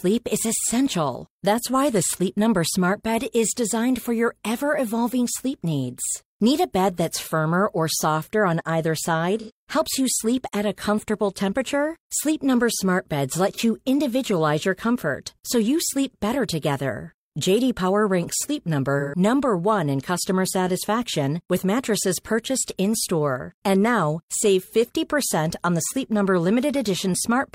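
Speech with AAC frame loss with concealment at 9.39–9.51 s, 13.53–13.60 s and 18.99–19.19 s. The decoder fills each gap of roughly 85, 43 and 128 ms, which fits two, one and three lost frames, by reusing the last good spectrum. The result is a brief smeared, noisy or phasey patch rather than a hard silence or click. That fill-in, not a gap, is what separates it from a plain dropout.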